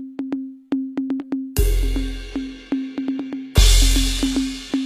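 HE-AAC compression runs through the whole music clip, with plainly audible damage and nothing above 14.9 kHz. The treble is likely rebuilt by spectral band replication, copying lower bands upward under a coarse envelope at a bitrate around 20 kbps. The upper range keeps its brightness but not its real content: harmonics fail to line up across the crossover, so any cymbals and sibilant edges come out gritty and metallic.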